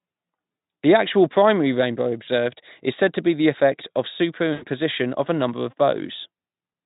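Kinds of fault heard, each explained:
VoIP packet loss concealed by the speech codec: the decoder papers over lost packets by stretching the last sound, so you get brief buzzy or noisy, fading smears at 2.23 and 4.53 s.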